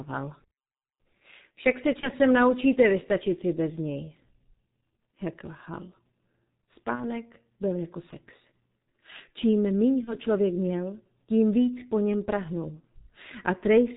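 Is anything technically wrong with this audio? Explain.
Yes. Throughout, the speech carries heavy G.723.1 codec damage, consistent with the 6.3 kbit/s mode. Its coarse 30 ms frames and slow voice model leave the sound muffled and hoarse with smeared consonants. A spectrogram would show nothing above 4 kHz.

There are also four moments of VoIP packet loss concealed by the speech codec, each consistent with one lost 30 ms frame. The first runs from 2.01 to 2.10 s, just before "naučíte vystačit si bez". The second runs from 6.95 to 7.10 s, before "byl jako sex". The third runs from 10.04 to 10.15 s. The fourth runs from 12.80 to 12.85 s, after "víc po něm prahnul". Each time the decoder repeats its last pitch and filter at falling gain, so a brief buzzy tone or coloured noise that fades replaces the speech. On a spectrogram this appears as smeared, stretched harmonics, and on a waveform as a decaying envelope.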